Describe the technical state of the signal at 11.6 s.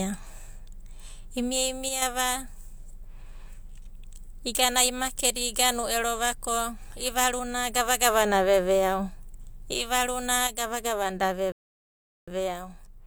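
At 11.6 s the signal is silent, because a rebuffering stall runs from 11.52 s to 12.28 s. The player exhausted its downloaded audio and halted output until more data arrived, then resumed exactly where it stopped. No speech is lost, but about 0.75 s of dead air is inserted into the timeline. The cut into silence is abrupt, and so is the restart.

Under and around that gap, from 10.47 s to the end of the clip, the level drops abruptly by about 6 dB and stays down. The most likely cause is that one stereo channel drops out. After the mono sum, content shared by both channels loses half its amplitude, and anything present only in the missing channel vanishes.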